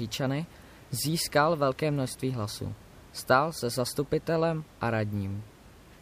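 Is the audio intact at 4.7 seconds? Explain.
Yes, the audio is intact at 4.7 seconds, with only the room's own background noise sitting about 24 dB below the speech.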